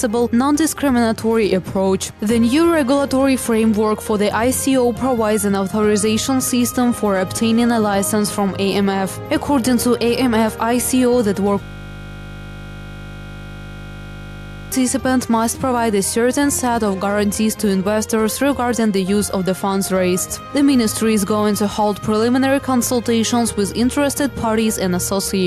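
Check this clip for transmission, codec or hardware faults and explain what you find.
One fault is present: a system hang loop from 11.63 to 14.72 s. The system froze while the audio hardware kept replaying the same 20 ms ring buffer about 150 times. Because the repeated piece is so short, the sound turns into a steady, mechanical buzz at 50 Hz for about three seconds.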